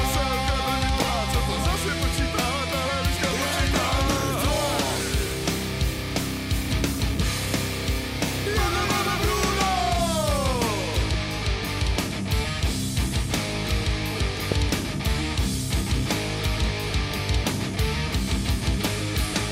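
A brief voltage spike, likely from a plug, switch or static discharge, entered the signal path twice, producing a loud pop from 1.02 to 1.04 s and another from 14.52 to 14.54 s. Each is a single sharp crack, roughly 15 dB above the surrounding sound, which continues underneath.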